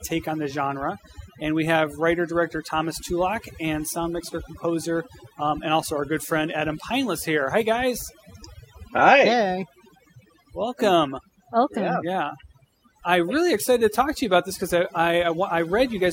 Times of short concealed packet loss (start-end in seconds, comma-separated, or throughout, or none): none